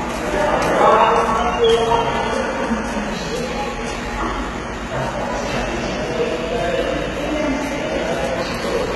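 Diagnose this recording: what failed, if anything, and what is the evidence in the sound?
The failure sits at the codec stage, and the likely culprit is HE-AAC compression, heard throughout the clip. Content is cut off entirely above about 11.8 kHz. Below that, the upper band sounds bright but synthetic, gritty and metallic. Spectral band replication copies lower bands upward under a coarse envelope, so the treble fails to line up harmonically with the lower band. That separates it from a plain low-pass, which simply dulls the sound. Damage this heavy points to a very low bitrate, around 16 kbps.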